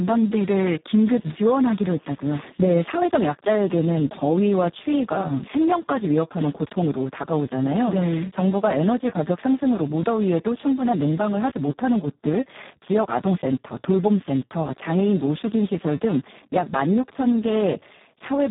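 From start to finish the speech carries heavy Speex codec damage. The excitation is starved of bits, so it comes out hoarse, noisy and edging toward robotic, which points to a very low setting around 4 kbps. Nothing sits above 3.9 kHz, leaving it dull and narrow.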